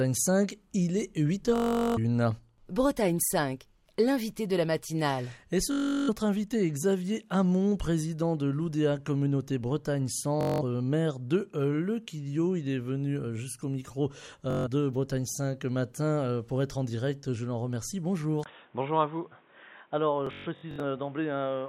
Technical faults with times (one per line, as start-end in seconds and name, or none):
1.56-1.98 Bluetooth stutter
5.72-6.09 Bluetooth stutter
10.41-10.62 Bluetooth stutter
14.51-14.67 Bluetooth stutter
18.44-21.68 input switched to a poorer device
20.27-20.83 Bluetooth stutter